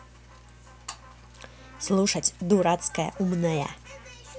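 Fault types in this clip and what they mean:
Mains hum: power-line interference leaking in, likely from a ground loop, showing here as a steady 60 Hz drone sitting about 25 dB below the speech the whole way through.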